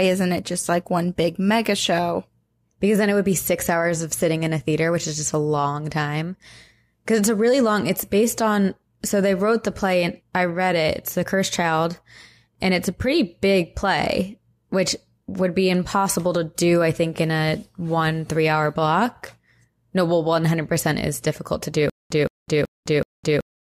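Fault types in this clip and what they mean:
Stutter with silent gaps: from 21.90 s to the end, the speech stops moving forward and a 170 ms burst repeats four times, each followed by about 207 ms of dead silence, every 378 ms, likely a stalled stream replaying its last fragment.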